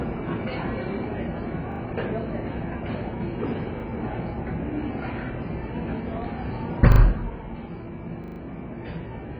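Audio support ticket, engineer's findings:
Dull, smeared sound throughout, with a fizzy warble and nothing above 5 kHz. Likely AAC compression at a very low bitrate, around 12 kbps.

Repeated buffer at 1.72–1.8 s, 3.8–3.84 s, 6.92–7.0 s and 8.24–8.4 s. A 40 ms piece replays one to four extra times with hard joins, giving a stutter. This fits a 40 ms playback buffer starved of new audio. No audio dropped.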